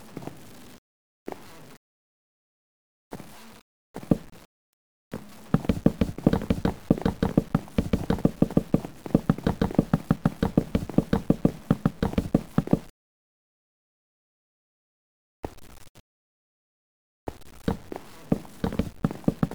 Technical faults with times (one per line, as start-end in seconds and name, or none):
0.00-19.54 low bit depth without dither